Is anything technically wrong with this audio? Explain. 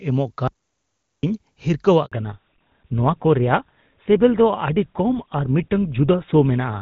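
Yes, three faults are audible in this speech clip.

From 0.48 s to 1.23 s there is an audio dropout to silence: the speech cuts off and about 0.75 s is replaced by silence with no room tone. The likely cause is a lost input, such as a disconnected device or a mute, while recording continued.

At 2.06 s a handover gap begins. The speech fades within a few tens of milliseconds and stays silent until 2.12 s, a 60 ms hole where no speech frames arrived while the call switched networks. That stretch of speech is lost.

From 2.12 s to the end there is a fallback to narrowband. Before the switch the call carries clean wideband speech, consistent with AMR-WB at its highest rate. Afterwards nothing above 4 kHz remains, which fits GSM full-rate coding, and the voice sounds duller and rougher.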